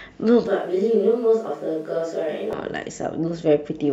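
At 0.47 s the speech abruptly turns roomy and hollow, with thinner bass, and stays that way until 2.53 s, when the close, full sound snaps back. This is a switch to a distant microphone, likely because the close microphone's feed dropped out. The level barely changes, and background noise sits roughly 35 dB below the speech. Unlike a low-cut filter or added reverb, both the thinning and the room sound arrive and leave together in sudden steps.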